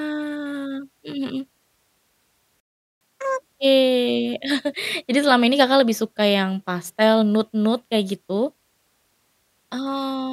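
A playback stall at 2.6 s cuts the speech off mid-flow, leaving about 0.41 s of silence until 3.01 s. The player likely ran dry of buffered data, or its output thread was blocked, so nothing reached the output until it recovered.

Catch-up at higher speed follows from 3.01 to 3.42 s. The player resamples its backlog to run at double speed, which also raises the pitch by roughly ten semitones, giving a brief chipmunk-like rush before normal speed and pitch return.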